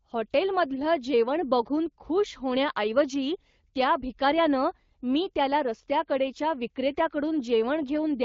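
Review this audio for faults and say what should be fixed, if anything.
No faults turn up in this audio, so nothing needs to be fixed.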